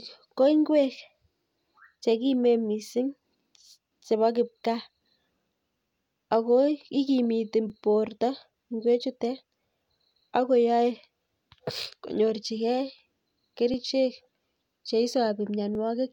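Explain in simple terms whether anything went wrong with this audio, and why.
There's a small tick every two seconds, at 1.66, 3.67, 5.69, 7.70, 9.71, 11.73, 13.74 and 15.75 s. That's overlapping chunks: the speech was handled in 2-second pieces, and each piece starts about 13 ms before the last one ended, so that tiny sliver plays twice at every join. You can catch it just before "chekimen mising", between "ak ko ikimiti" and "borto ing'wechutet", and right after "ko ikimiti borto ing'wechutet".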